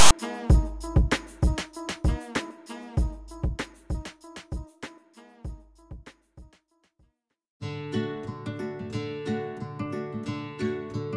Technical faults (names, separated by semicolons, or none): file tags played as audio